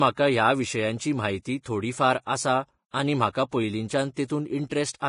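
Speech sits under heavy, grainy hiss throughout, with tones roughened and nothing present above 10.5 kHz. This is likely Vorbis compression at a low setting, around 31 kbps, where the treble is quantised into noise. On a spectrogram it appears as a hard ceiling with speckled high bands. Pre-echo appears at 1.63–1.66 s, between "ह्या विशयांची म्हायती" and "थोडी फार आसा आनी", at 4.14–4.17 s and at 4.28 s. Each is a short hiss lasting 18 to 29 ms that comes just before a sharp attack, because block-spread quantisation noise fills the quiet gap. A waveform shows low fuzz just ahead of each onset.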